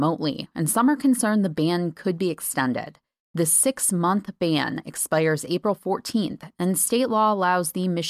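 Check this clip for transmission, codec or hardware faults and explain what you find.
The speech signal holds steady and continuous throughout, with nothing in it that points to trouble in the transmission path, the encoding or the recording hardware.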